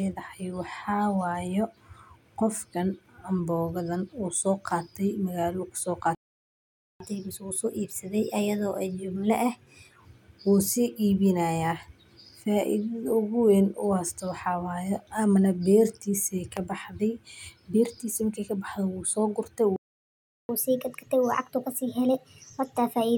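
At 6.15 s the speech cuts out mid-flow and the output falls silent for about 0.85 s, until 7.00 s. This is a playback stall: the player most likely ran dry of buffered data or had its output thread held up, so nothing reached the output until it recovered and resumed.

From 7.00 s to 10.00 s the speech runs quick and slightly high, at 1.1 times normal speed and roughly one and a half semitones up. This is catch-up at higher speed: the player resamples its accumulated backlog faster to recover the time lost in the gap, then settles back to normal.

A second playback stall follows at 19.76 s, with about 0.73 s of silence until 20.49 s, again cutting the speech off mid-stream and probably caused by a starved or blocked playback path.

From 20.49 s to the end, the catch-up is much more obvious, at 1.25 times speed with the pitch raised by around four semitones. Here the fast resampled playback lifts both the pace and the pitch of the speech.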